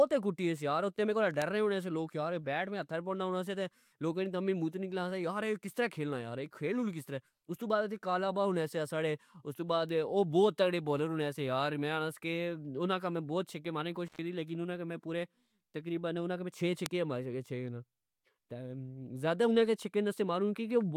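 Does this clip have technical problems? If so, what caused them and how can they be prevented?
Yes. Bit error spikes give single sharp ticks at 1.42 s, after "یار اتھے میرے کول", at 9.89 s and at 16.86 s. They peak at about -17, -29 and -11 dBFS. A flipped bit makes a sample value jump and snap back. Use error-checked digital links and reliable memory to prevent this.

An intermittent contact cuts the sound for about 107 ms, from 14.07 to 14.19 s, between "چھکے مارنے نی" and "لیکن انا اگہ میں". There is crackle at each edge, as a loose plug opens briefly. Secure and replace worn cables and connectors to prevent this.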